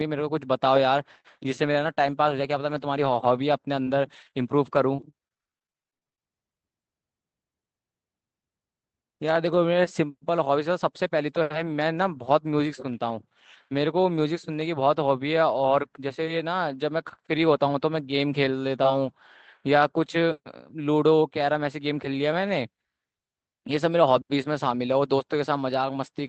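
From 1.61 to 6.27 s the speech turns choppy, with short holes and pieces missing. This is repeated packet loss (robotic sound): packets kept going missing, 21 short gaps, none longer than 35 ms, and each was patched by stretching the last sound forward. The patches add up to roughly 9% of that span. The call path's Opus coding, limited to about 8 kHz, runs throughout.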